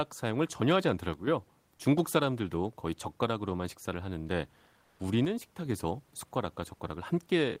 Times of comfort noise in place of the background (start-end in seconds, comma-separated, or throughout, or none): 4.83-4.99